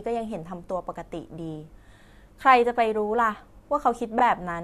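From 4.18 to 4.21 s, repeated frames: one 23.2 ms compressed frame decodes twice, giving a tiny stutter, with an identical slice duplicated in the waveform and spectrogram.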